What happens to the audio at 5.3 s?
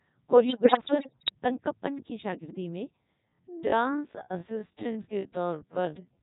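At 5.3 s the speech drags, with a slow, stretched-out pace while the pitch stays put. This time-stretched section runs from 3.23 s to the end of the clip, likely from software slowing the audio to about 0.59 times its original speed by repeating short pieces to fill the extra length.

Over that, the voice is robotic and buzzy, because the Codec 2 vocoder is heavily damaging it across the whole clip. It runs at 3.2 kbit/s. The decoder rebuilds speech from sine waves using only pitch, voicing, energy and a coarse spectral envelope, so the original waveform never survives.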